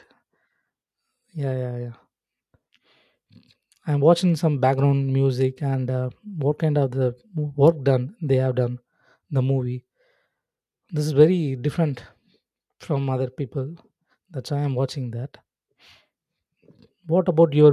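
No technical faults can be heard anywhere in this speech recording. Nothing in the signal path breaks up, drops out or changes at any point.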